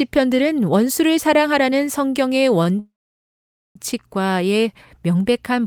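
At 2.63 s the speech hangs on one sound for an instant: about 18 ms of held audio from 2.63 to 2.67 s, then it carries on from the same point with nothing skipped. This is a short stall from a late packet. The jitter buffer ran dry, so the receiver stretched the last sound until the packet turned up.

From 2.79 to 3.77 s the audio freezes. The last sound is drawn out for roughly a tenth of a second, then there are 850 ms of silence, and the speech resumes where it stopped with nothing lost, now 962 ms later than before. This call audio freeze likely comes from packets being held up in transit until the jitter buffer ran empty and the receiver had to fill the wait.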